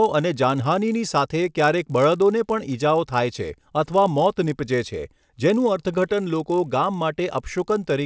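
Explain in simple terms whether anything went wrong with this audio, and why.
Yes. Throughout the speech runs a 50-per-second buzz, a sign of a resampler restarted on every block: each 20 ms chunk was converted alone, leaving a tiny error at every seam. Unlike mains hum, it stops whenever the speaker pauses.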